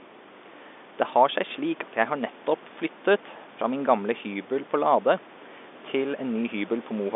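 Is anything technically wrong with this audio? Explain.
No, the signal is technically sound: it carries the expected band-limited character of G.711 mu-law telephone coding, with the line passing roughly 250 Hz to 3.6 kHz and nothing above 3.8 kHz, and a room noise sitting about 19 dB below the speech.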